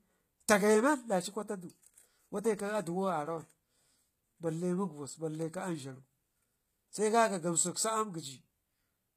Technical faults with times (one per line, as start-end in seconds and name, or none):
0.00-9.17 HE-AAC compression